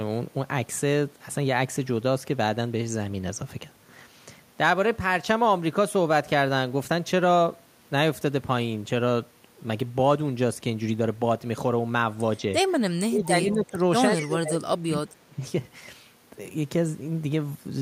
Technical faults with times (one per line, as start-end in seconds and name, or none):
13.01-13.77 speech suppressed in double talk
13.49-13.64 echo leak
14.16-15.39 speech suppressed in double talk